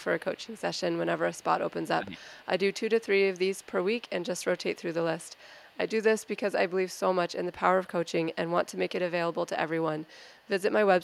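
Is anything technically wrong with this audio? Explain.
Yes. The speech carries two related faults from the far end's echo handling.

Echo leak is audible from 0.0 to 2.47 s, 3.0 to 7.32 s, 8.06 to 8.77 s, 9.32 to 9.36 s and 9.99 to 11.03 s. A faint delayed copy of the speech trails the original by 257 ms, sitting roughly 30 dB down in the first stretch and about 35 dB down afterwards. The likely cause is a loudspeaker-side echo canceller that leaves residual pickup, which is then sent back down the line.

Speech suppressed in double talk occurs from 1.97 to 2.38 s, overlapping the first echo stretch. For roughly 400 ms the talker's level dips, at its deepest by around 15 dB, so the speech sounds pushed back and partly swallowed. This is likely the echo canceller failing to separate local speech from loudspeaker echo while both sides talk, and attenuating everything together.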